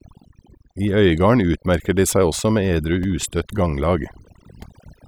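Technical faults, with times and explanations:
Throughout, overdone noise removal: an over-aggressive noise reducer gates bands near its noise estimate, leaving near-silent gaps with twinkling specks and taking quiet parts of the voice with them.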